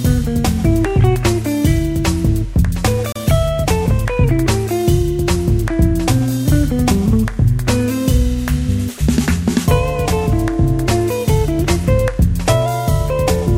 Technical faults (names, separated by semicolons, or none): gap at a join of encoded pieces